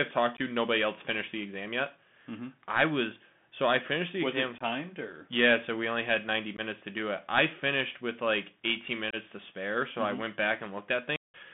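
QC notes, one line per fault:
Throughout: Bluetooth CVSD headset codec. The band is squeezed to about 150 Hz to 3.5 kHz, and the one-bit 64 kbps coding leaves scratchy s sounds over a grainy hiss.
0.37, 4.58, 6.57, 9.11 s: unconcealed Bluetooth headset packet loss. Each is a 15 to 22.5 ms hole with hard edges where a few packets went missing and nothing filled in. The one at 4.58 s follows "finished the was exam", 6.57 s comes just before "to do it I", and 9.11 s just before "to spare so".
11.16–11.34 s: the same unconcealed packet loss, but far longer. About 180 ms drops out, roughly twenty packets' worth, so there's an abrupt gap near the end.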